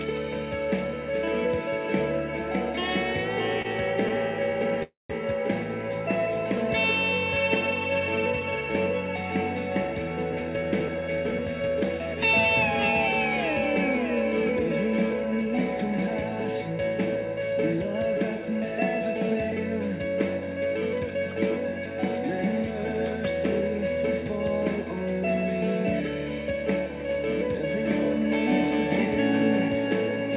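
At 3.62 s there is a short stall from a late packet, lasting about 26 ms. The packet came in late, the jitter buffer ran dry, and the receiver stretched the last sound to cover the wait, then picked up where it left off. Nothing is lost, but the sound is held a little too long, with a faint buzz or dip. On a spectrogram the harmonics run flat for that sliver instead of moving. The waveform repeats the same cycle briefly.

From 4.83 to 5.12 s the audio freezes. The last sound carries on as a fading buzz, then about 170 ms of near silence follows before the audio resumes from where it stopped. This adds about 267 ms of delay and removes nothing. It is likely a call audio freeze, with packets held up in transit and the buffer emptying. A spectrogram shows smeared, fading bands giving way to a blank column. The waveform shows a tapering repeated pattern, then flat line.

From 10.33 to 15.61 s a jitter buffer speed-up runs the audio at about 105% speed with unchanged pitch. 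The buffer had built up surplus audio, so the receiver trimmed many tiny pitch-period slices, around a third of a second in total, to bring latency back down. The passage sounds slightly hurried. On a spectrogram, events sit closer together while the harmonic spacing stays put. The waveform shows small seams where cycles were cut. Throughout the clip, nothing appears above 4 kHz, which fits the narrowband G.711 call path.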